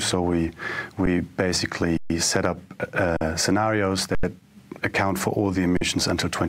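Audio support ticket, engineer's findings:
Underrun with held sample, five events: 1.06 s (10 ms), 1.97–2.10 s (128 ms), 3.17–3.21 s (43 ms), 4.15–4.23 s (85 ms), 5.77–5.81 s (43 ms). Output buffer starving; DAC holds last value, so sound flatlines at the held level without a hard click. Three gap lengths fit 2048- and 4096-sample blocks. No audio lost; playback resumes where it paused, soft restart.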